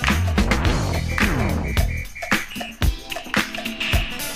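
A short stretch of audio with one problem: processor overload crackle from about 2.45 to 2.62 s. For that sixth of a second the sound turns gritty and torn, because the machine couldn't get its audio buffers out on time and a run of them, something like half a dozen or so, just got skipped. Each skip leaves a tiny hard-edged hole, and buffers around 10 ms long stack those holes into a crackly burst that stops once the load eases.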